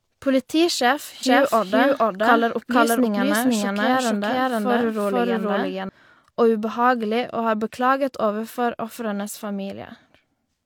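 From 1.23 s to 5.89 s the speech carries a doubled audio track: a second, full-band copy trails the original by about half a second at roughly the same loudness, so every phrase is heard twice. This is likely a second capture through a slower path being mixed back in. Unlike an echo or room reflection, the copy has no decay and no added reverberant colour, and it cuts in and out abruptly at both ends.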